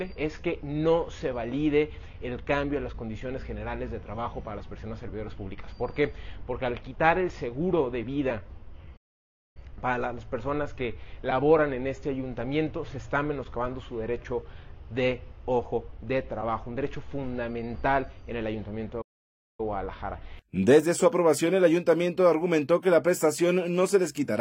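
At 8.96 s the sound cuts out dead for about 0.59 s, then returns at 9.57 s; the same playback stall hits again from 19.01 to 19.60 s, roughly 0.57 s. Each gap is most likely the player starving for data or its thread getting blocked.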